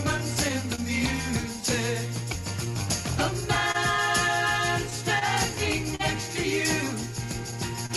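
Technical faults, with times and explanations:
Throughout: clock drift between sender and receiver. The sending end's clock runs roughly 3 percent slow compared with the receiver's, so the jitter buffer keeps drifting toward empty. The receiver has to keep patching around that with small stretches and holds. You don't get one obvious glitch. Instead there's a faint, recurring unevenness in timing across the whole clip, popping up at irregular spots rather than on a steady beat.
0.17–1.56 s, 2.65–3.76 s and 4.90–6.01 s: scattered short gaps. Each of these stretches has a handful of small holes, about four in the first and three in each of the others. The longest is around 30 ms in the first two and around 40 ms in the last. The receiver papered over each one by carrying the previous sound forward, so nothing actually drops out. What you hear are brief ticks or little smears; in the last stretch roughly 70 ms in all is filled in.
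1.61–2.69 s: repeated timing corrections. The receiver is quietly stretching things here, playing at about 98 percent speed to let the buffer catch up with the slow sender. Altogether it adds something like 40 ms, spread over several tiny edits that all go the same way. Each one is small enough to slip by, so it comes across as a slightly dragging, not-quite-steady tempo rather than a clear hiccup.
7.86–7.91 s: short stall from a late packet. Near the very end a packet didn't show up on time and the buffer ran dry. The receiver held the last sound for 33 ms until the packet arrived, then carried on from exactly where it left off. Nothing's missing, but that moment hangs a touch too long, with a slight buzzy or dipped quality while it's being held.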